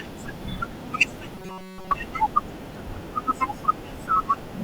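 Robotic sound from repeated short buffers runs from 1.35 to 1.92 s in this speech clip, where the voice collapses into a rigid, metallic buzz at 188 Hz that only loosely tracks the words. The likely cause is audio arriving too slowly, so the playback side keeps replaying a tiny slice, about 5.3 ms, to fill the gaps. Most of the real signal in that stretch is skipped, and the repetition rate imposes its fixed pitch.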